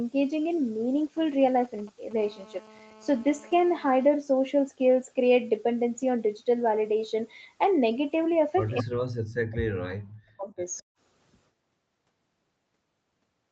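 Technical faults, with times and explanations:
1.17–2.13 s, GSM signalling bursts: A nearby 2G phone is sending short groups of radio bursts while it signals the network, without a call in progress. The audio circuitry rectifies these radio pulses into the signal path. The result is a galloping dit-dit-dit pattern of brief buzzes repeating at about 217 Hz. It sits roughly 25 dB below the speech and has nothing to do with what is being said.
2.18–4.09 s, GSM phone buzz: The same phone has moved into an active call and now transmits continuously in bursts at 216.7 Hz. The circuitry again demodulates the radio energy, but because the bursts no longer stop, the interference becomes a steady, hard, raspy buzz rich in harmonics. It runs at about −25 dB relative to the speech, unbroken for nearly two seconds, and then stops.
8.82–10.61 s, speech suppressed in double talk: The speech dips sharply and breaks up in pieces across this stretch, with the deepest cuts around 40 dB down and roughly one and a half seconds affected in total. 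The likely cause is both ends talking at once: the echo canceller cannot separate the local talker from the loudspeaker echo, so it turns everything down. The talker fades and chops rather than coming through cleanly.
10.78–10.82 s, echo leak: A faint, delayed copy of the speech slips through for about 40 ms. It arrives 206 ms behind the original and sits around 40 dB below it, so it is heard as a faint scrap. This likely comes from the far end's echo canceller failing to remove all of its loudspeaker pickup from the microphone and sending the remainder back down the call.
10.89–10.98 s, background gated by the echo canceller: While the loudspeaker is active, the echo canceller clamps the microphone hard, and the room background drops out briefly by as much as 40 dB. The gap lasts about a tenth of a second, and the ambience snaps back once the canceller releases. Over the Opus call path, whose bandwidth stops at 8 kHz, this is heard as a sudden hole in the background.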